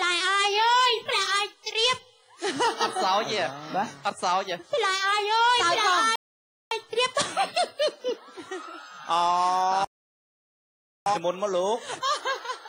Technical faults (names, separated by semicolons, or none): playback stall